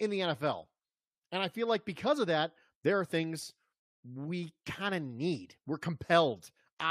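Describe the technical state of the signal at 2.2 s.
At 2.2 s the speech signal is intact, with no audible dropout, clipping, glitch or other fault.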